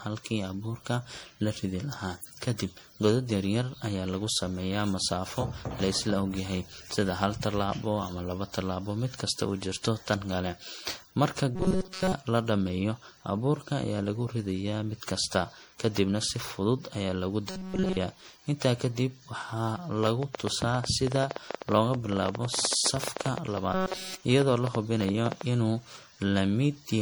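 Throughout, the speech shows generation loss, likely from being encoded again and again as MP3 at around 64 kbit/s, perhaps five times over. Each fresh pass re-quantised the audio on a shifted frame grid, so the noise and gaps in the spectrum add up. The result sounds swirly, hollow and smeared, with blunted attacks.

From 11.55 to 12.14 s, just before "la dhammeeyo abuurka ayaa", the audio shows robotic sound from repeated short buffers, likely because fresh audio arrived too seldom and the playback looped the last few milliseconds for most of that stretch. The looping imposes a rigid metallic buzz at 188 Hz, which fits a buffer of about 5.3 ms. The same fault comes back, with the real audio entirely replaced, from 17.49 to 17.97 s, right after "si fudud ayaa lagu".

From 20.03 to 25.42 s, after "kadib waxaa", a train of clicks sets in, likely interference or a faulty connection injecting pulses. 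There are about fifty similar clicks at roughly 10.2 per second, unevenly spaced, and they sit about 15 dB above the speech as audible ticking. Within this passage the repeated-buffer buzz returns at 188 Hz from 23.73 to 24.22 s.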